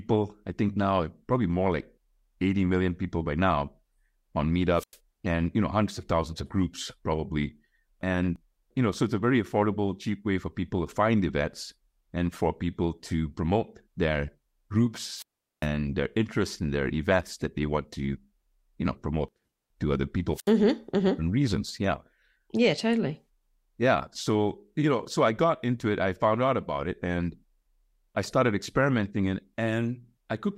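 Speech with three wireless microphone squelch dropouts at 4.76, 15.14 and 20.34 s: faded FM signal brings brief hiss, then muted near-silent gaps of about 0.1, 0.4 and 0.07 s, showing as blank spectrogram columns and flat waveform.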